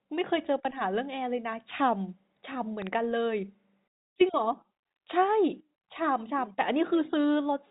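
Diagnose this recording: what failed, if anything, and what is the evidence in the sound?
The fault is a loud pop between 2.82 and 2.89 s: two sharp thumps in quick succession, peaking a few dB above the speech. The speech carries straight on underneath through the narrow G.711 telephone band, with nothing above 3.8 kHz. Because the audio isn't interrupted, something added a sudden voltage step on top of it. That's likely a connector, switch or static discharge in the analogue wiring, with the following circuitry shaping each step into a thump.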